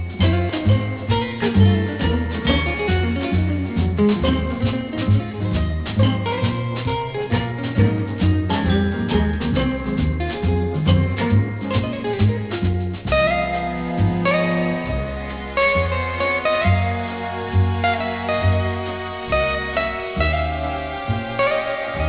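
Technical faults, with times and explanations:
Throughout, aliasing: content above 4 kHz folds back below that line into harsh, unrelated tones, about 20 dB under the main signal, which fits a drop to an 8 kHz rate with no anti-alias filter. High detail turns gritty and metallic, and energy crowds the band edge.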